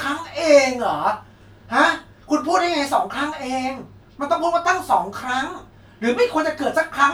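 No technical fault can be heard anywhere in the speech recording.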